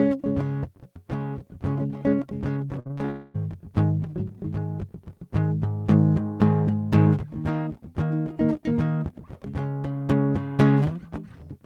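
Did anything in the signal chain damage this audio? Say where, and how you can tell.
Yes. The network stage damaged this music. From 2.79 to 3.10 s the stream suffered repeated packet loss (robotic sound): five gaps, the longest about 59 ms, with roughly half that stretch concealed by extending the previous audio. The receiver kept patching hole after hole, so the music turns choppy, with about 140 ms of real material simply gone.

Right after, from 3.10 to 3.36 s, there is a gap of about 240 ms with no fresh music in it. The concealment carries the last sound through the whole stretch as a fading buzz or hiss rather than dropping to silence. When the music resumes, that quarter-second is missing. The likely cause is a long network dropout, where nothing arrived for that span.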